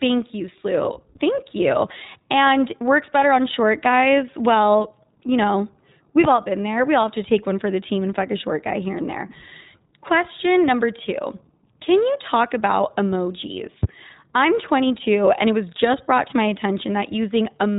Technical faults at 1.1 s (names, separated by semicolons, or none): iLBC codec